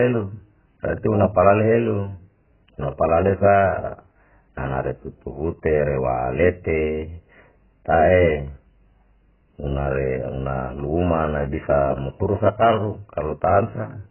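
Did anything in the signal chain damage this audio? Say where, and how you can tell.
Yes, at the codec stage, across the whole speech clip. Nothing survives above 3 kHz, and sibilants sound smeared and fizzy: heavy AAC compression, likely AAC-LC at a bitrate near 8 kbps. A spectrogram shows a hard ceiling at 3 kHz.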